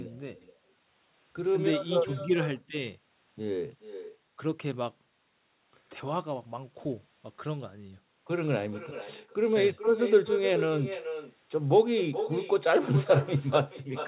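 Speech runs through the whole clip with an echo and no canceller behind it. Every phrase returns a little under half a second later. The copy sits about 9 dB below the direct speech. It sounds thinner than the original. The far end is playing the call through a loudspeaker. Its microphone picks that sound up again, and nothing removes it before it travels back. The audio stops at 4 kHz, which points to a narrowband G.711 call path.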